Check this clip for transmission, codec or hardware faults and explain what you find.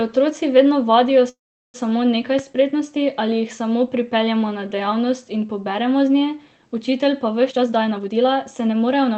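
Three faults are audible: a call audio freeze, a loud pop and a jitter buffer speed-up, all heard over a call-codec path whose top end stops around 8 kHz.

Call audio freeze, 1.29 to 1.76 s, right after "vedno vadijo": packets were likely held up in transit until the jitter buffer ran dry. The receiver then invented sound to cover the wait, a brief continuation of the last sound that fades, leaving about 0.38 s of silence. When the packets arrived the speech resumed exactly where it stopped. Roughly 0.45 s of gap was inserted, nothing was lost, and everything after it runs that much later.

Loud pop, 2.39 to 2.41 s, just before "spretnosti ali jih samo": a sudden voltage step or pulse, likely from a plug, switch, static discharge or driver glitch, got added to the signal, and the downstream circuitry shaped it into a single sharp transient. It peaks about 5 dB above the speech. The pop sits on top of the sound, which continues underneath without interruption.

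Jitter buffer speed-up, 7.49 to 9.17 s, starting after "z nje učitelj pa": the buffer was holding more audio than its target, so the receiver trimmed the excess by cutting out many short pitch-period-sized pieces in succession, about 0.4 s in total. The speech plays at around 123% speed with its pitch unchanged, so this stretch sounds noticeably hurried and compressed compared with the rest.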